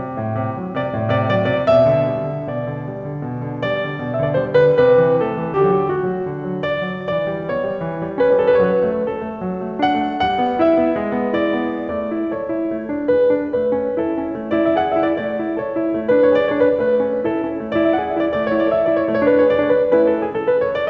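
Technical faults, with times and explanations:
5.54 s, skip ahead: About a second of the music is missing. Playback jumps forward with no gap, and the two sides are butted together. Audio was dropped, on the way or by an overfilled jitter buffer, while later audio was already waiting, so the delay dropped by about a second at once.
5.71 to 8.53 s and 9.03 to 10.86 s, jitter buffer speed-up: The music runs fast, about 8% and then 11%, at unchanged pitch. The tempo loses its steadiness and feels hurried. The receiver still held excess audio and trimmed many tiny pitch-period slices, roughly 200 ms in each stretch.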